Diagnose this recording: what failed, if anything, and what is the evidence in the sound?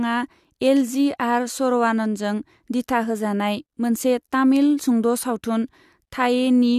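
Nothing failed here; the speech comes through steady and intact, with nothing at any stage of the chain that stands out as a problem.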